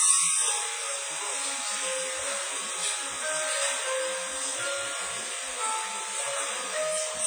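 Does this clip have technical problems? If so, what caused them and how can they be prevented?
Yes. The audio was likely passed through WMA compression at a low rate, which fits a bitrate near 24 kbps. Its long transform blocks smear quantisation noise across tens of milliseconds and discard weak components, so throughout the clip the sound rings and turns washy, with a hiss that breathes with the signal. Encoding at a much higher bitrate, or keeping a lossless copy, would prevent this damage.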